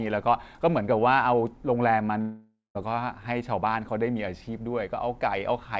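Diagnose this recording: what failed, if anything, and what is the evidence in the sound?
Likely a long network dropout, 2.21 to 2.77 s: a fading concealment buzz turns to silence, then speech resumes with content skipped, not delayed as in a buffer stall.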